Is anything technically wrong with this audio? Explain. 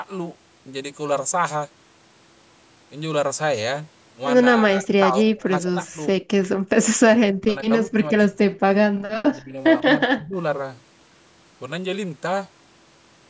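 Yes. Two echo-canceller problems show up in this speech recording, which has passed through call microphone processing with nothing above about 8 kHz.

Speech suppressed in double talk occurs from 4.62 to 5.99 s, 7.16 to 8.39 s, 9.31 to 9.55 s and 9.82 to 10.36 s. The likely cause is the echo canceller failing to tell the near talker apart from loudspeaker echo while both sides spoke, so it attenuated everything. The voice sinks by around 25 to 30 dB at worst.

The background is gated by the echo canceller at 6.56 to 6.69 s and 8.91 to 9.05 s. With the loudspeaker active, the canceller clamped the microphone hard, then released it. The room sound drops out for a brief moment, around 150 ms each time, falling by about 21 dB in the first gap and about 31 dB in the second, before the ambience snaps back.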